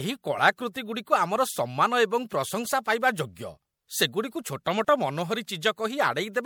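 Speech with generation loss throughout: it sounds swirly, hollow and smeared, and consonant attacks blur, likely from being MP3-encoded a few times over at something like 96 kbit/s. A spectrogram shows flickering holes, smeared onsets and nothing above 20.6 kHz.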